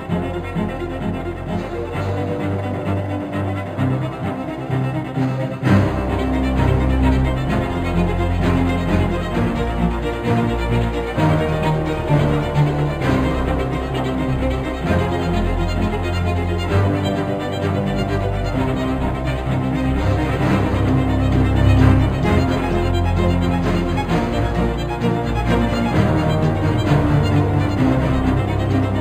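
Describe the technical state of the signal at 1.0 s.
At 1.0 s you're hearing imaging from linear upsampling, and it runs through the whole clip. The sound points to an 11 kHz source raised to 44.1 kHz by straight-line interpolation between samples, which filters poorly. The top end is dulled, and a faint mirror image of the spectrum, about 35 dB down, sits from 5.5 kHz to 11 kHz. You'll catch it as a thin metallic shimmer on the bright, sibilant parts of the sound.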